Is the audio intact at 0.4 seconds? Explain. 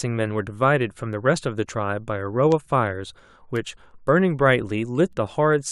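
No. At 0.4 s the speech carries word clock ticks, which run from 0.26 to 5.65 s. A receiver clocked independently of its source, off by around 100 ppm, slips one sample roughly every 0.2 s, giving about thirty sharp, regularly spaced clicks.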